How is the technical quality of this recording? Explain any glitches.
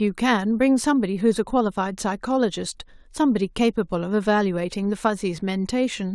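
The technical quality is sound, with no glitches to explain.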